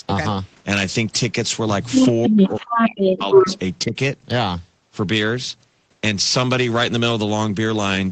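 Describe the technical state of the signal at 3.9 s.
From 3.86 to 3.95 s the speech ducks by about 15 dB for roughly 100 ms, likely speech suppressed in double talk: the echo canceller, confusing the talker with loudspeaker echo, turned the signal down. The level dips rather than going fully silent, unlike a packet dropout.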